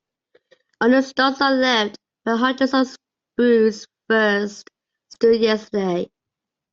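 At 5.13 to 5.16 s there's a corrupt frame decoded: one compressed frame of the speech got its bits scrambled, and the decoder played it anyway. Wrong gains or misread codes push energy into wrong frequencies for about 30 ms, giving a short glitch peaking around -25 dBFS.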